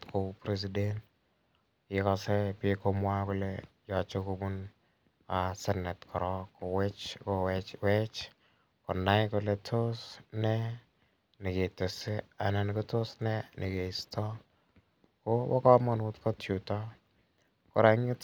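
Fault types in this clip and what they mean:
There are no fault types in this speech clip.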